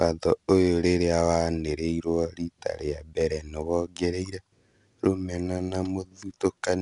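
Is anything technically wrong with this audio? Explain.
Yes. Throughout the speech, the audio has passed through 4-bit ADPCM compression. Each sample was stored as a coarse 4-bit step from a predicted value, with the step size adapting to the signal, and the bandwidth points to a low sample rate near 22 kHz. The quantisation error rides along with the level, so louder syllables carry a plainly audible gritty hiss. Abrupt onsets distort where the step size lags behind, and nothing reaches above 10.6 kHz, leaving the top end dulled.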